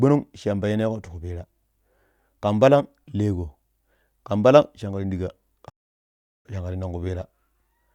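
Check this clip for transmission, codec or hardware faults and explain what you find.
A single fault is audible, a playback stall. From 5.69 to 6.46 s the speech falls silent for 0.75 s, likely because the player ran out of data, then resumes. This shows as a flat waveform gap and a blank spectrogram band.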